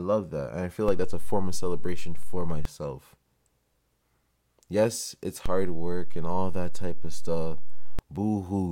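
Right after "I feel" at 0.88 s, a DC step shifts the zero line by about -19 dBFS until 2.65 s, and again from 5.46 to 7.99 s, thumping as each step comes in.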